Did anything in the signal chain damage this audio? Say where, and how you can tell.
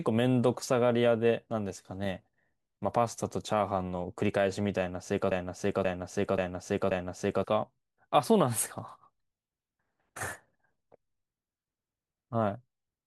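Yes. From 5.31 s to 7.44 s the speech stops moving forward and a 0.53 s fragment repeats exactly, back to back, four times. That is a broken-record loop. The stage is likely playback or streaming, where a stalled buffer kept replaying the last piece it held. Each repeat is identical, so no new audio arrived during those two seconds. Whatever was said in that stretch is lost.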